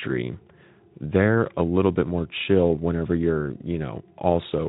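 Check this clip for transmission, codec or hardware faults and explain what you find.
Nothing stood out on listening to this speech.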